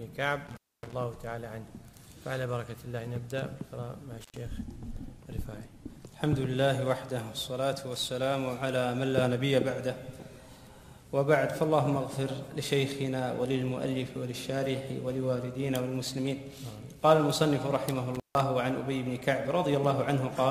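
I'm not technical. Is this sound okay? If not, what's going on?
No. There is an intermittent contact at 0.47 to 0.93 s, 4.21 to 4.38 s and 18.14 to 18.40 s. A loose cable or plug briefly loses connection, so the sound drops out for about a quarter second, a tenth, then a sixth, with crackles as it breaks and reconnects.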